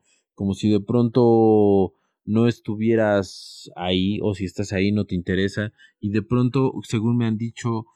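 A slow flanging runs through this speech from start to finish, a hollow swirl that keeps sliding through the tone as the two sides are folded to mono. The fault is channels drifting apart. Left and right were captured on devices running from separate clocks that disagree by a couple of hundred parts per million. The gap between them creeps to about a millisecond by the end, dragging the comb-filter notches steadily across the spectrum.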